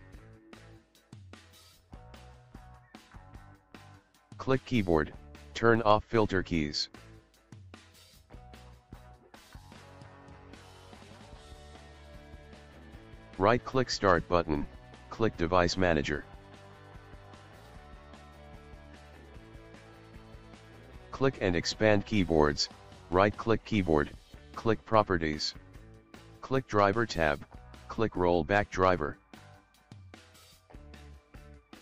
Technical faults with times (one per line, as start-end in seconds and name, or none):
none